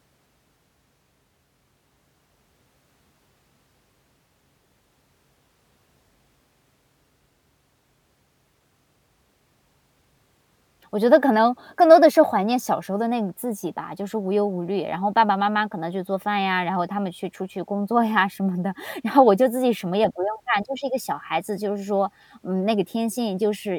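No faults are audible anywhere in this speech recording.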